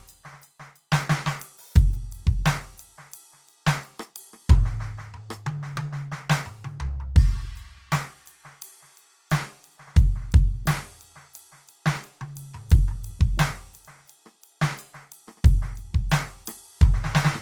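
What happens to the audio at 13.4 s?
At 13.4 s the music carries plainly audible Opus compression, present for the whole clip. Tones sound rough, grainy and noisy, since the encoder fills starved bands with folded or noise energy. The likely cause is a low bitrate near 24 kbps.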